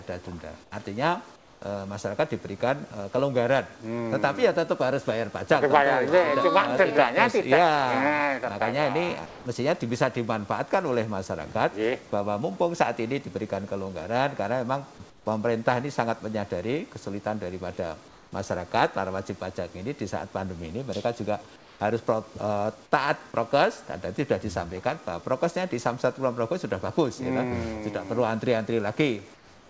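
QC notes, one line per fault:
0.64–0.72, 1.36–1.62, 9.26–9.46, 15.10–15.26, 18.08–18.32, 21.56–21.80 and 29.34 s to end: comfort noise in place of the background. Pauses of 80 to 360 ms turn into flat, featureless hiss, about 2 to 7 dB quieter than the real background. This is likely discontinuous transmission, with the receiver synthesising noise in the gaps of the G.722 call path, which is band-limited to 8 kHz.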